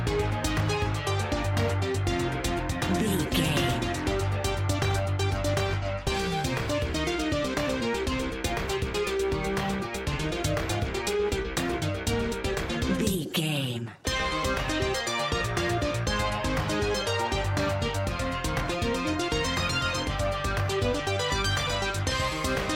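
No technical faults can be heard anywhere in the audio.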